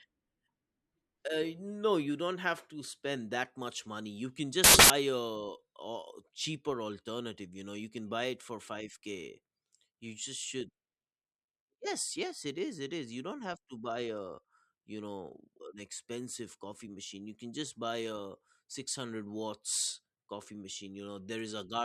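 At 4.64 s the speech gives way to a burst of loud, harsh broadband noise lasting until 4.90 s. This is samples built from the wrong bytes. For about a quarter of a second, the reader assembles each sample incorrectly, by a byte offset, swapped byte order or wrong alignment. The rapidly changing low bits end up as the large part of each value. The result is harsh hiss in place of the speech.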